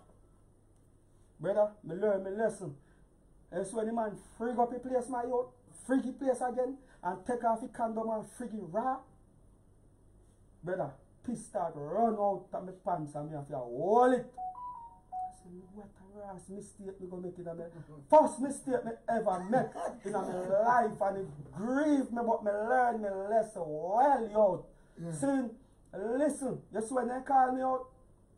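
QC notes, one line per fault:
5.67 to 5.69 s, skip ahead: playback jumps forward with no fill, losing roughly 0.4 s of audio, so the two sides butt together almost seamlessly and something simply goes missing. On a spectrogram the frames change abruptly at one vertical seam, and the waveform shows a direct splice without any silent gap.
7.60 to 9.27 s, jitter buffer speed-up: the jitter buffer trims its surplus by cutting short pitch-period pieces again and again, removing roughly 0.15 s in total, so the sound runs about 9% fast at unchanged pitch and sounds hurried. The spectrogram keeps harmonic spacing steady while events crowd together in time.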